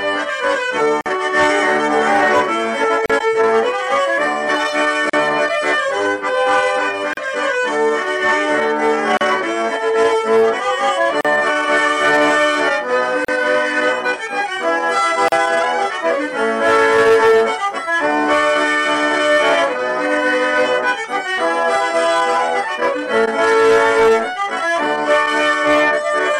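The audio has a repeating gap at a join of encoded pieces. Short silences cut into continuous sound at 1.01, 3.06, 5.10, 7.13, 9.17, 11.21, 13.25 and 15.28 s. The first lasts 48.5 ms. The rest last 37.6 ms. They recur about every 2.0 s. Each gap has smeared edges, and the sound resumes where it stopped. Separately encoded pieces were joined untrimmed, so each piece's encoder start-up silence and padded last frame stayed in.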